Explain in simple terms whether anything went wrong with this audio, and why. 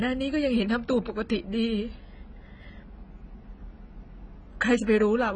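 AAC compression, likely the cause, affects the whole speech recording from start to finish. Nothing comes through above about 9.2 kHz, so the speech sounds dull and smeared, with a warbly, fizzy edge on hissing sounds, because the encoder threw away detail to save space.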